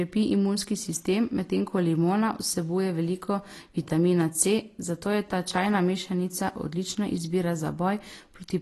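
Throughout the speech, nothing sounds above about 12.1 kHz. The sound is dull and plainly smeared, with a warbling, fizzy edge on sibilants. This is likely AAC compression, AAC-LC at a low bitrate, which fits about 32 kbps. Coarse quantisation starves the upper spectrum.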